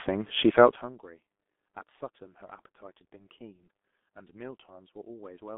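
Throughout the speech, the G.723.1 codec leaves heavy damage. Nothing passes above 3.6 kHz, within a 200 Hz to 3.5 kHz telephone band. The slowly updated voice model makes speech muffled and hoarse, with smeared consonants. This fits roughly 6.3 kbit/s.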